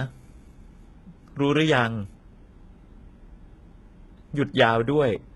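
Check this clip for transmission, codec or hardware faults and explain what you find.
One codec fault runs through the whole clip. It sounds like HE-AAC compression at a very low bitrate, near 16 kbps. The likely cause is spectral band replication. Only the lower band is coded. The treble is copied up from below and shaped coarsely. The damage is heavy. The upper range sounds bright but false. Its harmonics do not line up with the lower band. S sounds in the speech turn gritty, metallic and lispy.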